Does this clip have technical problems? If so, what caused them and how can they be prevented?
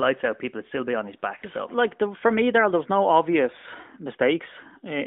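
Yes. Lost AMR speech frames occur from 1.38 to 1.45 s. About 40 ms is missing, which fits two 20 ms frames failing their checksum. The decoder bridges the gap by reusing its last good pitch and vocal tract settings at falling gain. The sound smears briefly and dips, then returns weak or rough for a moment. The narrowband 200 Hz to 3.5 kHz channel carries this concealment. Better radio coverage or stronger error protection would prevent these frame losses.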